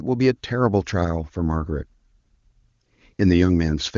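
No faults are audible in the speech, and the AMR wideband (HD Voice) codec path sounds like it is running at one of its higher rates, with no roughness or rasp.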